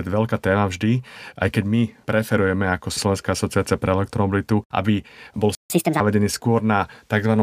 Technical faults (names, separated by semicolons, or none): playback stall; catch-up at higher speed